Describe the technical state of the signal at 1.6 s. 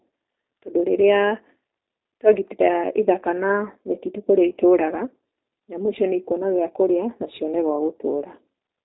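At 1.6 s the speech is going through the G.729 codec, which affects the whole clip. The codec rebuilds each 10 ms frame from a vocal tract filter, a pitch predictor and a few pulses, so the speech sounds rough and faintly synthetic, consistent with 8 kbit/s coding. On a spectrogram the energy stops at a flat ceiling near 4 kHz, and the harmonics look smeared and blocky from frame to frame.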